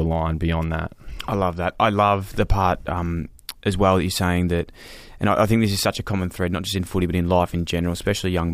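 No technical faults are audible.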